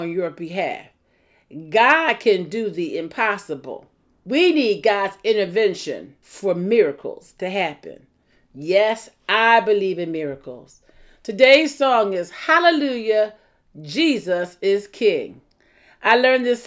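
From 13.4 s to the end, the speech carries a steady ticking at 10 per second, present only while sound is present. The resampler restarted on every block: each 100 ms block was converted separately, which fits a 24 kHz to 16 kHz change, leaving an error at each block edge.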